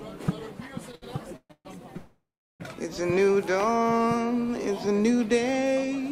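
Between 0.91 and 1.67 s the audio drags and stutters, with four short holds, the longest about 133 ms, together covering nearly half of that span. These are repeated stalls (stutter): packets kept arriving late, so the jitter buffer emptied each time and the receiver stretched the last sound for 350 ms in total, losing nothing. At 1.97 s the sound hangs, decays and then goes silent for about 380 ms before resuming at 2.62 s, 629 ms later, exactly where it stopped. This call audio freeze was likely caused by packets being held up in transit, which drained the buffer and left a filled gap rather than a loss. From 3.67 to 3.90 s the audio slows to 80% speed at unchanged pitch, drawn out by 56 ms. This is a jitter buffer slow-down, where the receiver repeated single pitch periods to rebuild its reserve.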